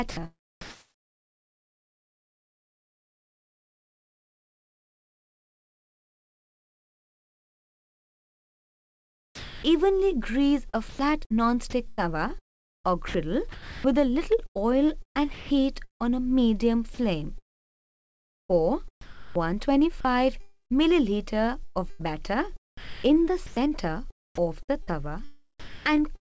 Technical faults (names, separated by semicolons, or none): sound chopped by the voice detector; sound dropped by the voice detector